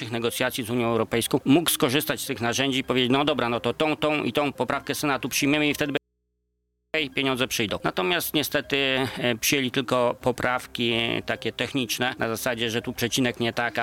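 At 5.97 s the wanted signal was likely lost upstream while the path after the break stayed live, producing an audio dropout to a faint residue. For about 0.97 s, until 6.94 s, the sound cuts off abruptly rather than fading, and the gap is left holding only mains hum from the open input, sitting very far below the normal level, roughly 50 dB down. The sound then snaps straight back in mid-flow.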